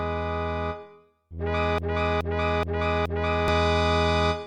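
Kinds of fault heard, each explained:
Broken-record loop: Most likely the player or stream stalled and kept resending the last block of audio it still held instead of moving on. From 1.78 to 3.48 s the sound catches on a fragment about 0.42 s long and plays it four times back to back, identical each pass, giving a stuttering, mechanical repetition. Whatever should have played during those seconds never arrives, so the sound jumps ahead when the loop breaks.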